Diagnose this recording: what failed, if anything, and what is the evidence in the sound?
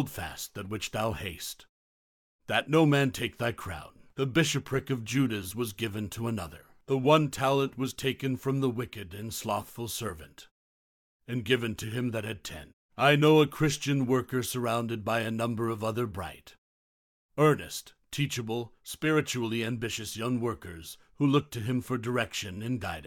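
Nothing has failed in this speech recording; no stage in the chain shows a fault. In the pauses the output fades to silence and the background drops away, then returns in time for each next phrase with no speech lost, which is the muted-pause processing doing its job.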